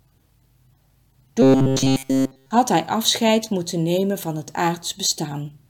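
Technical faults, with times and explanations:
1.42–2.51 s, robotic sound from repeated short buffers: the sound becomes a rigid, metallic buzz at 133 Hz, made entirely of repeats while the real audio is skipped. Audio likely arrives too seldom, so a fragment of about 7.5 ms is replayed, fixing that pitch.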